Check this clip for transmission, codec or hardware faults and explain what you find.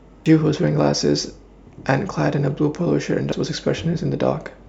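The speech has two brief codec faults, both from damaged data in a compressed stream, at 0.26 s and 3.32 s. Corrupted bytes make the decoder misread frames and hunt for the next valid header, producing a short chirp or blip. A spectrogram shows a thin broadband vertical streak; the waveform shows a brief discontinuity.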